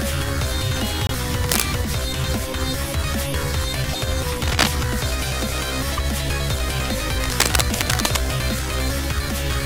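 Broken MP3 bit reservoir, at 1.07 to 1.11 s: the audio jumps ahead and the first instants after the jump come out as a brief chirp or burst of noise. The likely cause is missing 24 ms frames, so the following frame reads reservoir bytes belonging to another frame.

Cable scratch noise, from 1.46 to 1.62 s: dense, uneven scratching rides over the sound, about as loud as the sound itself. It likely comes from a worn cable or connector being moved, its contact resistance changing rapidly.

The same broken MP3 bit reservoir glitch returns at 3.93 to 3.95 s and again at 5.97 to 5.99 s, each a short jump. The scratch noise recurs from 4.43 to 4.68 s and, longest, from 7.24 to 8.19 s.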